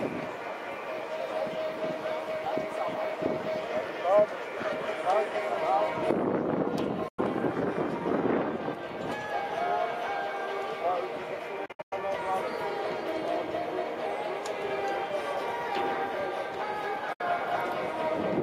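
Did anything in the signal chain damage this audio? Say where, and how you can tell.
Yes, a digital broadcast dropout at the reception stage. The sound fades to silence within about 8 ms and returns at 7.08 to 7.19 s, 11.66 to 11.93 s, and 17.13 to 17.21 s. The middle event is several short holes scattered over roughly 0.26 s, the longest about 96 ms. The gap lengths fit whole frames of about 32 ms failing their checks and being muted. The short fades and true silence, with no clicks or smeared concealment, set it apart from a buffer underrun or network packet-loss concealment.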